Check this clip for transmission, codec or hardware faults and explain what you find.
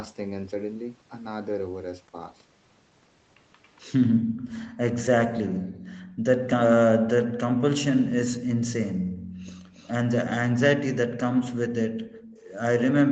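There are three kinds of echo-canceller trouble here in this speech clip. The audio is band-limited to 8 kHz, which fits an Opus call path at around 24 kbps.

Background gated by the echo canceller: from 4.13 s to 9.72 s, and again from 11.88 s to the end, the room tone keeps ducking out. While the far-end loudspeaker was active, the canceller clamped the mic hard, about 40 dB at its deepest. Across the first stretch that adds up to roughly a second and a half of missing ambience. You hear it as the background briefly going dead, then popping back when the canceller releases.

Speech suppressed in double talk: between 9.1 s and 10.54 s the talker's own speech gets cut, only around 70 ms in total but very deep, on the order of 40 dB. This is likely the canceller failing to tell the near-end talker from the loudspeaker echo while both sides were talking, so it turned everything down. The result is short holes and dips punched into the speech rather than a steady loss.

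Echo leak: from 9.75 s to 9.93 s there's a faint ghost copy of speech trailing by about 0.28 s, sitting roughly 30 dB under the main speech. That's likely one side's canceller not fully removing what its mic picked up from its loudspeaker, so a scrap of the signal got sent back. It's brief and quiet.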